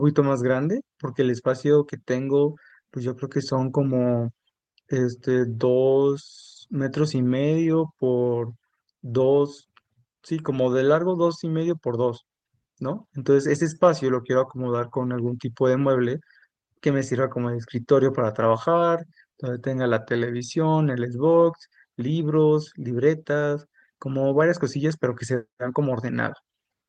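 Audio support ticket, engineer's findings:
Lost packet rebuilt from error correction at 7.61 s, 10.95–11.01 s, 14.39–14.41 s and 16.17–16.19 s. No gaps. Brief rough, noisier patches, 20 ms each and 40 ms at 11.0 s, consistent with single and paired lost packets. Opus decoder playing low-bitrate in-band FEC copies.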